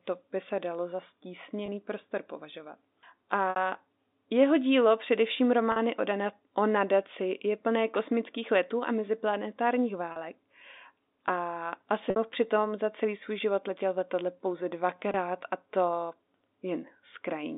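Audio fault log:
1.66–1.68, 3.50–3.56, 5.72–5.76 (after "jeho dílo především", before "o dana o nadaci"), 10.12–10.16 (after "kosmických letů a meziplanetárních"), 12.10–12.16 (before "přitom za celý svůj"), 15.12–15.14: packet loss with pitch repetition. Gaps of 20–60 ms, which fits one to three lost 20 ms packets, are filled by repeating the last pitch cycle. Unlike a plain dropout, there is no click; the shorter gaps give only a brief held buzz, while the 60 ms ones fade into silence before speech returns with a short cross-fade, within the band-limited telephone sound.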